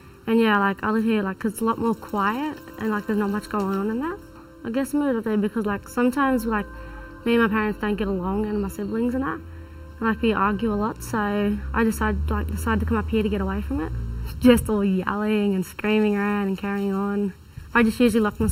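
From start to finish there's channel delay with comb filtering: one side runs roughly 0.7 ms late, so the mono sum cancels at evenly spaced points, first around 700 Hz and then every 1.4 kHz or so. The result sounds hollow and phasey throughout.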